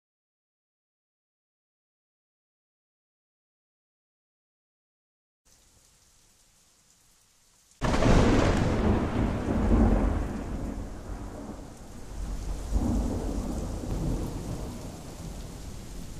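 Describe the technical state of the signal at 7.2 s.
At 7.2 s the signal is intact, with no audible fault at that moment.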